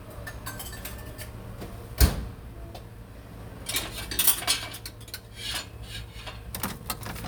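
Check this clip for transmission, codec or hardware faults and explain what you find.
One fault turns up, a brief ordering error near the end.

Chunks out of order at 5.86 s: a 5.8 ms block of audio was delivered one chunk late and plays after its successor. Nothing goes missing, but the swapped pair creates three abrupt joins, heard as a brief scrambled moment in the sound.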